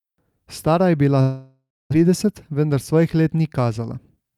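From 1.21 to 1.94 s the speech breaks off in what sounds like a long network dropout, likely from lost packets. About 0.6 s is gone; the last sound trails into a fading buzz, then about 0.26 s of near silence. A spectrogram shows smeared, decaying bands, then an empty gap.

From 3.90 s to the end, a jitter buffer speed-up trims short pitch-period slices to shed roughly 50 ms of backlog, so speech runs about 9% fast at unchanged pitch and sounds hurried. The waveform shows whole cycles dropped, with unchanged harmonic spacing.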